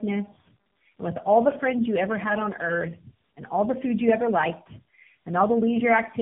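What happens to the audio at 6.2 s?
Tandem speech coding is audible at 6.2 s, as it is throughout the clip. The speech has passed through three low-rate speech coders in a row, each re-coding the previous one's errors. The result sounds rough, muffled and warbly, with nothing above 3.7 kHz.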